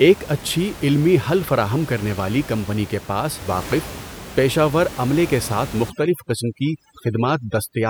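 From 5.9 s to the end, after "ور عملے کے ساتھ", overdone noise removal crushes the background, about 16 dB below speech, to twinkling specks, unlike steady codec dulling.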